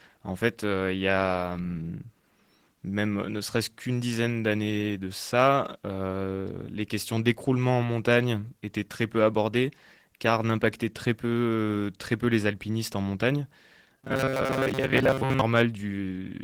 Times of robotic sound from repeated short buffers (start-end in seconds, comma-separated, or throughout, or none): 13.97-15.41